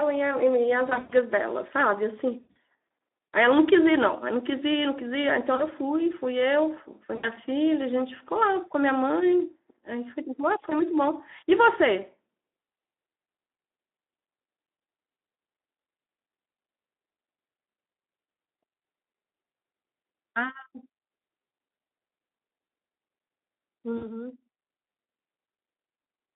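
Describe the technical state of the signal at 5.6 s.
At 5.55 to 5.67 s, VoIP packet loss concealed by the speech codec occurs. Roughly 40 ms of data is missing. The decoder extends the last pitch and filter, giving a brief, fading buzzy tone or coloured noise.

The Speex codec affects the whole clip. Its damage is plainly audible as hoarse, noisy speech confined to 250 Hz to 3.6 kHz, at a rate of 11 kbps.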